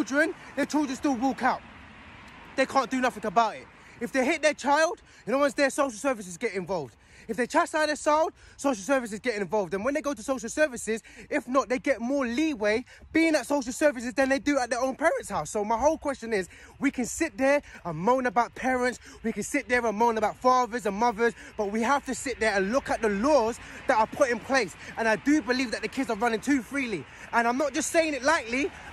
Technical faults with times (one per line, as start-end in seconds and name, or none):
0.63 block of digital silence
17.75 block of digital silence